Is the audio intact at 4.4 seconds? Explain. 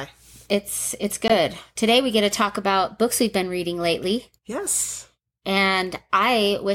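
Yes, at 4.4 seconds the speech carries on cleanly with no dropout, click, distortion or other fault to be heard.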